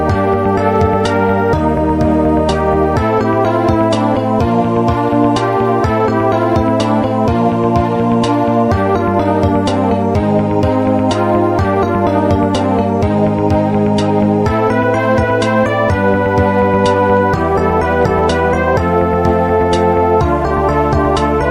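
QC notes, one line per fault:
Nothing stood out on listening.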